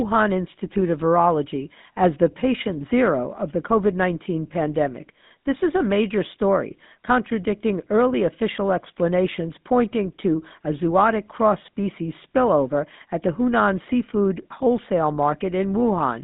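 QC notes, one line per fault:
throughout GSM full-rate codec: band held to about 150 Hz–3.7 kHz, spectrogram empty above; pulse-driven vocal-tract model, which fits a 13 kbps coder, leaves buzzy, gravelly roughness and visibly striated harmonics.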